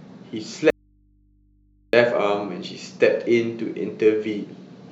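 From 0.70 to 1.93 s the speech cuts out abruptly, leaving only faint mains hum far below the signal: an audio dropout to a faint residue, likely an open, still-live input.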